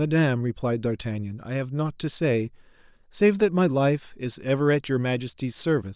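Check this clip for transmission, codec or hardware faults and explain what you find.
Nothing in the speech signal points to a transmission, codec or hardware fault, with its level, continuity and frequency content all holding steady across the clip.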